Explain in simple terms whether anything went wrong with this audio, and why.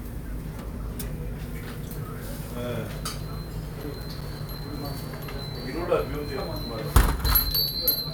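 CD scratch ticks, from 3.65 to 5.13 s: a row of nine short, regular clicks, about six a second, each lasting at most around a hundredth of a second. A scratch on the disc wipes out more data than the player can repair on each turn, so it patches or silences those moments.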